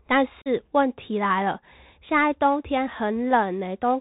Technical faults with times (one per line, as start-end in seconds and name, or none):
0.00-4.00 Bluetooth CVSD headset codec
0.42-0.48 unconcealed Bluetooth headset packet loss